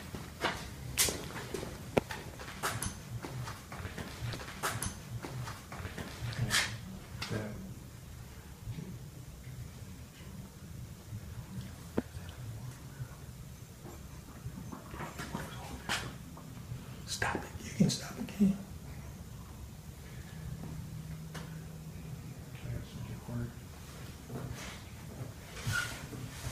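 Around 4.33 s there's a stream segment repeated: the player fetched or queued the same two seconds twice, so the sound jumps back with a small blip and replays until 6.33 s.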